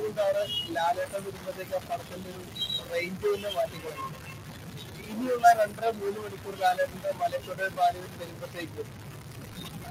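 Stuck bit throughout: quiet moments fill with noise, likely because one data bit is held fixed so about half the samples are wrong. Loose connector crackle at 0.87 to 2.14 s, 3.61 to 4.04 s and 6.67 to 8.31 s: irregular bursts of scratching as a worn contact rapidly makes and breaks, chopping the signal.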